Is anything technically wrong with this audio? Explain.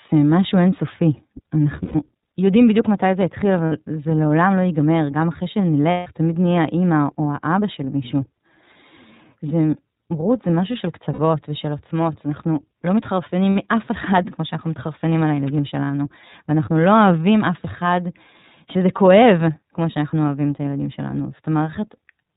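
Yes. The speech has been through the iLBC codec for its whole length, and five short stretches were lost and concealed by the decoder.

iLBC codec: The codec damage is plainly audible throughout. iLBC is a narrowband VoIP codec that codes each frame's excitation on its own, and the character here fits 30 ms frames at about 13.33 kbps. Nothing above 4 kHz survives, so a spectrogram shows a hard ceiling at 4 kHz with empty space above it. The speech stays intelligible but sounds rough and synthetic.

Lost iLBC frames: Gaps start at 1.82 s (120 ms), 3.66 s (60 ms), 5.91 s (150 ms), 11.13 s (60 ms) and 13.52 s (60 ms). Each length fits whole 30 ms frames going missing. The decoder covered each gap by repeating the last pitch cycle mixed with noise, so it sounds like a held, buzzy or breathy vowel. A waveform shows a short run of near-identical repeated cycles, and a spectrogram shows flat, smeared harmonics. 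Because each frame stands alone, the speech recovers almost at once after every gap.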